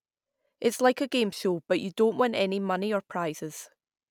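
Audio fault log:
Nothing stood out on listening to this speech recording.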